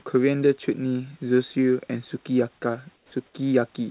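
From 2.96 to 3.12 s the room background turns into a smooth, featureless hiss about 6 dB quieter, and again from 3.26 to 3.34 s at unchanged level. This is comfort noise in place of the background, likely from discontinuous transmission pausing the sender while the receiver synthesises filler.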